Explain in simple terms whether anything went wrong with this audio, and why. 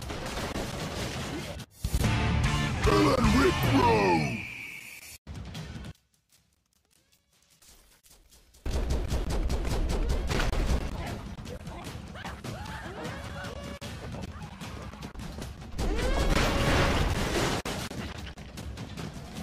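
From 5.91 to 8.66 s the sound suddenly drops to a faint trace. The likely cause is one channel inverted, so matching parts of left and right cancel when combined. Unlike a dropout, a weak ghost of the sound remains rather than silence.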